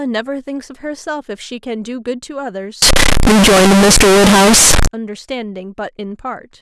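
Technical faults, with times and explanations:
2.82 to 4.87 s, float read as integer: the speech suddenly turns into a blaring, squared-off roar at an almost fixed, high level, with background noise as loud as the talker, though the pitch still comes through. It's likely 32-bit float samples being read as 32-bit integers.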